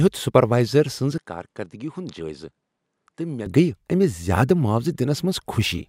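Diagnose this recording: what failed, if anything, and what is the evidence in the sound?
From 1.18 s to 3.46 s, right after "سپروائزر سٕنٛز", the speech turns duller and quieter, dropping roughly 10 dB, with nothing above 11.4 kHz and a new low background noise about 50 dB under the signal. Full bandwidth returns at 3.46 s. The stage is the driver's device routing: the system likely made an input switch to a poorer device and back. What separates this from a codec bandwidth drop is that tone, level and noise floor all change together at the same instant.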